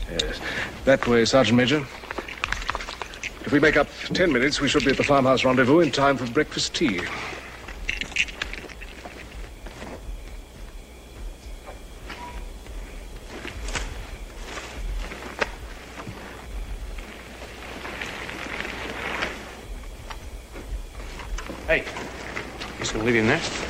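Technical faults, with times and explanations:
No technical faults can be heard anywhere in this audio. Nothing in it calls for a time or an explanation.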